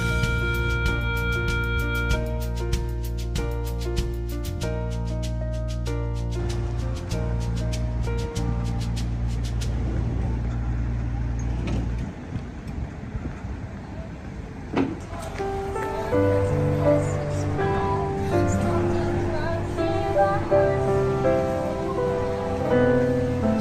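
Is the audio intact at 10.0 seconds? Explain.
Yes, the audio is intact at 10.0 seconds, with no dropout, click, distortion or other fault at that point.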